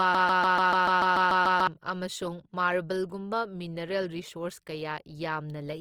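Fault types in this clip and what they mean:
Opus compression: The encoder was likely running Opus in its CELT music mode at a low rate, which fits about 24 kbps. It fills starved bands with folded or noise energy, so the speech sounds rough and grainy throughout, though the bandwidth still reaches 20.2 kHz.
broken-record loop: The stream likely stalled and kept resending the last fragment it held. A 146 ms piece repeats exactly, back to back, about ten times from the very start until 1.67 s, and the audio meant for that span is lost before "ꯑꯃꯁꯨꯡ ꯃꯥꯔꯕꯜꯒꯨꯝꯕ".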